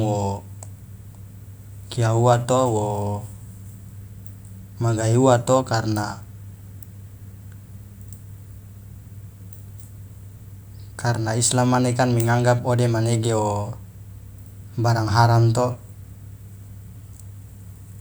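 No technical faults are audible.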